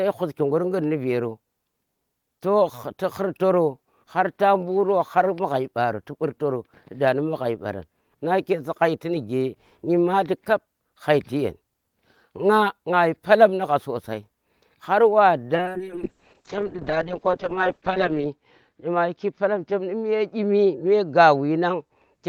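From 15.58 s to the end of the clip the speech turns rough and muffled, losing its top end so that it sounds dull and watery. This is a call bitrate drop: the connection's bandwidth estimate fell and the encoder was forced to code far more coarsely, in a way that points to a fall from around 32 kbps to about 6 kbps, held at its lowest for 2.72 s. The audio bandwidth narrows from 20 kHz to 8 kHz and does not recover before the clip ends.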